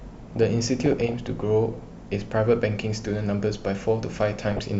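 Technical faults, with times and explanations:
0.36 to 1.14 s, DAB burbling: a stretch of bubbling, squelchy chirps over the speech. A small fraction of bit errors, around 0.2 percent, slipped past error correction into the MP2 data. Corrupted samples put short noise blips in single sub-bands, and corrupted scale factors make individual sub-bands jump in level for up to a frame, which fits several dozen damaged frames.
4.48 to 4.59 s, DAB burbling: a brief second burst with a denser error rate, roughly 0.4 percent, across a handful of frames.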